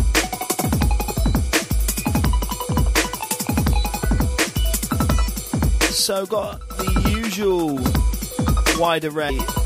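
At 0.63 s and again at 9.29 s, the audio jumps forward as compressed frames are skipped. Whole frames never reach the output, either because they are missing from the stream or because the decoder rejected them as corrupt, so playback resumes further along. The first gap loses roughly 40 ms, the second closer to 150 ms, which points to a run of several frames each time.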